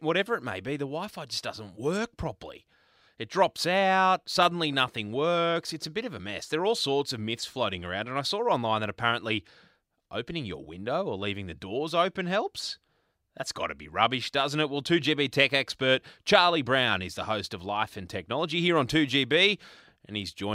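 No technical faults can be heard anywhere in the speech recording, and the signal holds steady throughout.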